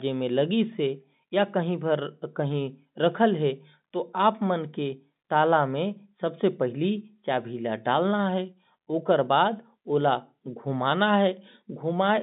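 No technical faults are audible.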